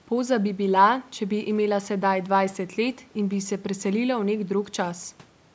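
No technical faults can be heard in this speech. It has passed through a call's microphone processing, which trims away the lowest bass and leaves nothing above 8 kHz, as that path normally does.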